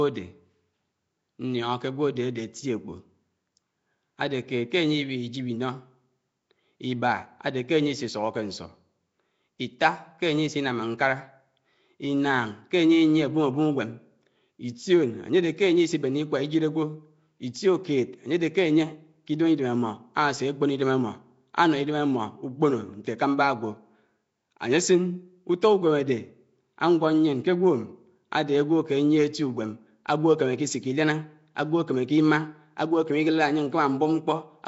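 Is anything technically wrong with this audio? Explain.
Yes. Throughout, the speech shows Nellymoser compression, likely from the old Flash microphone codec. Weak bands were given no bits and refilled with noise. That leaves a rough, hissy halo and a smeared, underwater tone. Nothing sounds above 7.7 kHz. The damage points to roughly 32 kbps.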